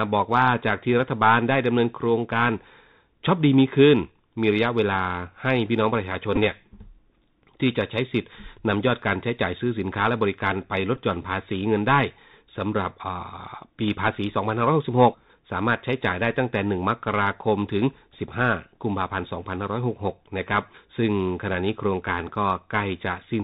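The whole recording carries the sound of a Bluetooth CVSD headset codec. Its damage is plainly audible. The link encodes one bit per sample at 64 kHz, stepping the waveform up or down. Nothing above 4 kHz survives, so the speech sounds boxed in. A granular hiss sits under it. Sibilants turn scratchy. Loud, bright moments outrun the adaptive step and distort.

From 6.36 to 6.38 s there is a Bluetooth headset packet repeat. About 11.2 ms of audio is missing, which fits three lost packets. The headset decoded the previous packet's bits again in their place. Repeating every 3.75 ms gives a brief buzz near 267 Hz. The same fault returns at 10.96 s, again covering about 11.2 ms. It is a short, steady buzz before good packets return.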